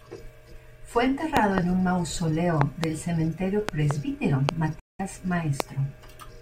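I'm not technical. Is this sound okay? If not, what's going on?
No. Loud pop: a sudden electrical spike, likely from a plug, switch or static, adds sharp pops over the speech at 1.37, 2.61 and 3.69 seconds (each a quick double pop), then single pops at 4.49 and 5.60 seconds. Bluetooth dropout: sound data likely failed to reach the headphones in time, so the speech goes silent for about 0.2 seconds from 4.79 seconds and resumes as if it had kept playing.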